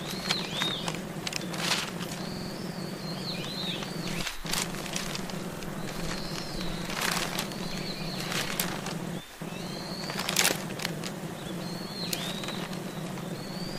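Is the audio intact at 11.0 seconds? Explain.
No. A repeated buffer at 10.96–11.01 s replays the previous 46 ms block once, fitting a 2048-sample buffer, producing a brief stutter with hard joins but no lost audio.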